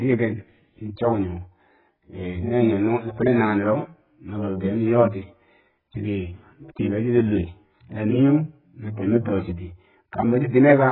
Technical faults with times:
0.00-10.91 AAC compression

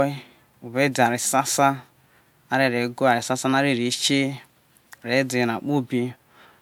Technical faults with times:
none

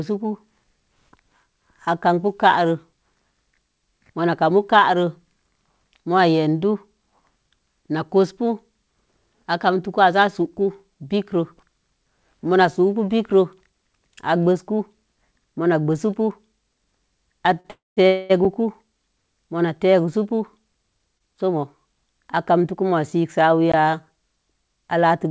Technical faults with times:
17.60-17.66 short stall from a late packet
17.70-18.32 call audio freeze
18.45 block of digital silence
21.18-21.22 short stall from a late packet
23.72 block of digital silence

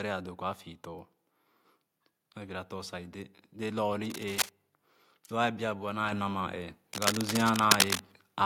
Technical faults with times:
4.05-4.50 cable scratch noise
6.12 microphone volume stepped up
6.93-8.02 cable scratch noise

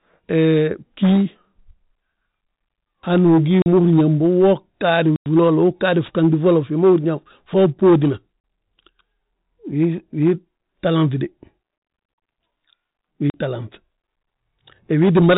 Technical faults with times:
3.62-3.66 packet loss filled with silence
5.16-5.26 packet loss filled with silence
8.40-8.44 packet loss filled with silence
13.30-13.34 packet loss filled with silence

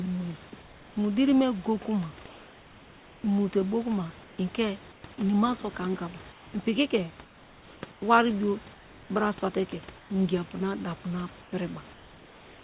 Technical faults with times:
2.26-3.24 comfort noise in place of the background
4.24-4.38 comfort noise in place of the background
4.92-5.04 comfort noise in place of the background
6.32-6.54 comfort noise in place of the background
7.24-8.02 comfort noise in place of the background
8.74-9.10 comfort noise in place of the background
9.98-10.10 comfort noise in place of the background
11.42-12.64 comfort noise in place of the background

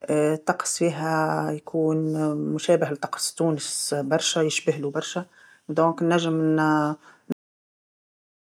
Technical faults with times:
7.32-8.41 cut-off end

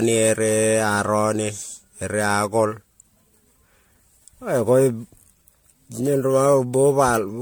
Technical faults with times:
0.00-7.42 generation loss

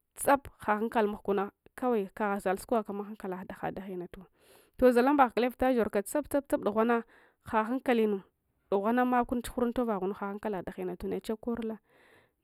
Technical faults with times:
0.00-12.44 channel delay (comb filtering)

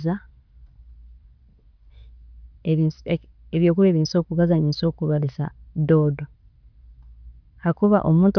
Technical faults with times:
none

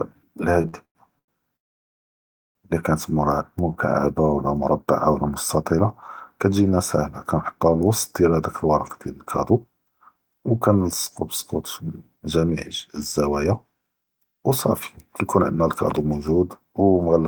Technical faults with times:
0.61-1.30 repeated stalls (stutter)
1.56-2.57 call audio freeze
9.51-11.22 jitter buffer speed-up
11.84-12.51 jitter buffer speed-up
13.27-14.50 jitter buffer speed-up
15.22-17.19 jitter buffer speed-up

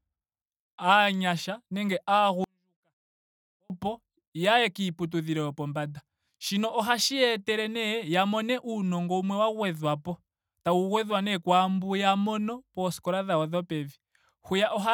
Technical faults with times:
2.44-3.70 24-bit alignment error (too quiet)

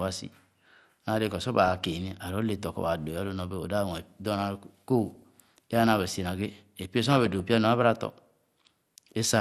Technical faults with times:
0.00-9.41 MP2 compression
1.60-1.92 DAB burbling
5.15-5.23 DAB burbling
7.04-7.40 DAB burbling

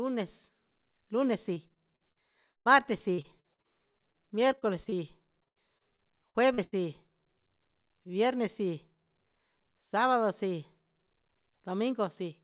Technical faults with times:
1.54-4.94 repeated packet loss (robotic sound)
5.44-6.74 repeated packet loss (robotic sound)

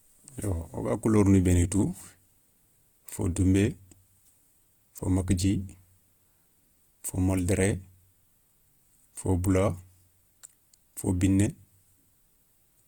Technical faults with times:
0.00-12.87 Opus compression

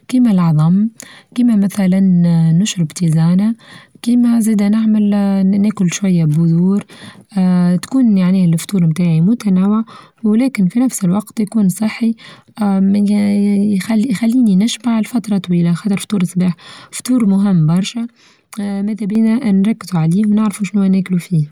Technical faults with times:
17.89-19.15 one channel drops out

